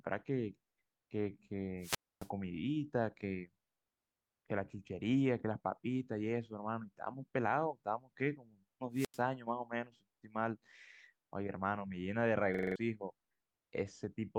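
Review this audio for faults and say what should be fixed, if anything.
Two wireless microphone squelch dropouts occur, at 1.79–2.30 s and 8.93–9.21 s. Each time the RF signal fades, hiss rises, and the receiver's squelch mutes the output, for about 270 ms and then about 91 ms, before the speech returns. Better antenna placement, a diversity receiver or a shorter transmitter distance would prevent this.

A system hang loop runs from 12.54 to 12.76 s. The machine stalled while the audio hardware kept replaying its ring buffer, so a 42.67 ms slice repeats five times as a stutter at 23.4 Hz, which fits a 2048-sample buffer. About a fifth of a second of speech is lost. Fixing the driver or system stall behind the freeze would prevent it.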